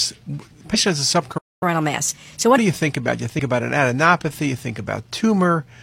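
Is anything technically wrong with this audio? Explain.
Yes, there are three kinds of fault. Damaged data in a compressed stream appears at 0.70 to 0.76 s and again at 3.35 to 3.40 s. Each is a brief glitch where the decoder misread corrupt frames and resynced on the next header.

A playback stall runs from 1.37 to 1.63 s. The speech stops mid-flow for about 0.24 s. This is likely a starved buffer or a blocked player thread. It is a true gap, not a garbled blip.

Catch-up at higher speed follows at once, from 1.63 to 2.58 s. The player works off its backlog at 1.25 times normal speed, so the speech is rushed and raised by about four semitones.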